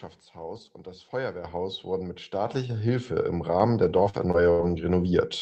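At 1.44 s, between "und das" and "wurden mit", the microphone volume is stepped up by about 7 dB. It steps up again at 2.46 s, just after "wurden mit", by about 5 dB, and at 3.6 s by about 2 dB. Each time the call software raises the device input gain in a single step, so the voice and the background jump louder together. That shared jump is what separates it from someone simply speaking louder.

From 3.83 to 4.71 s there is repeated packet loss, which gives a robotic sound. Four separate gaps, the longest 81 ms, are each patched by stretching the previous sound, and together the patches cover roughly a fifth of the stretch. The result is choppy, not one clean dropout. The call path's codec limits the top end to about 8 kHz throughout.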